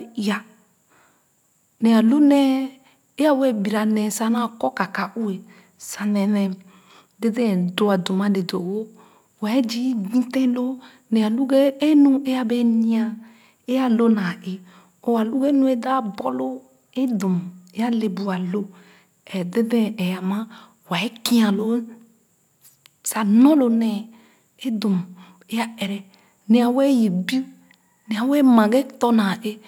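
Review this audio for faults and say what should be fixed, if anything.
Nothing to fix; no faults found in the speech recording.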